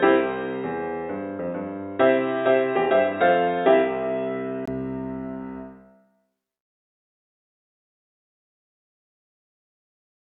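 From the start to 4.68 s the input was likely switched to a poorer device, one that passes nothing above 3.8 kHz, so the sound is dull and boxy over a faint new noise floor. At 4.68 s a 20 ms silence marks the return to full bandwidth, with no real level jump.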